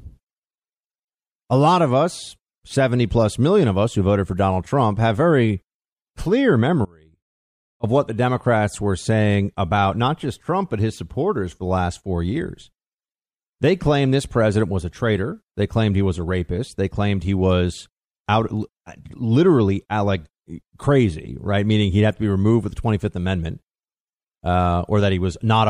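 Audio dropout to a faint residue, 6.85 to 7.83 s, after "have very clear": the speech likely lost its feed while the path stayed live, leaving faint sound roughly 30 dB down until "what the".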